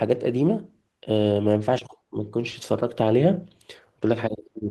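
No technical faults are audible.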